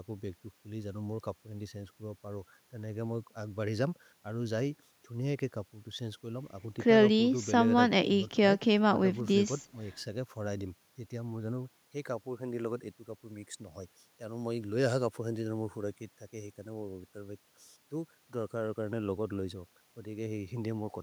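Nothing in the speech stood out as a technical fault on listening.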